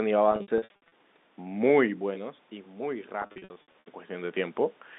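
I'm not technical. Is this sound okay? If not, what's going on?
No. Packet loss with pitch repetition, 0.32–0.92 s and 3.22–3.86 s: small pieces went missing, and each gap was patched by repeating the last stretch of voice, sounding briefly buzzy and held.

Automatic gain rising, 2.0–4.63 s: the talker moved away around 2 s, so the system gradually turned its volume up, making voice and background swell together.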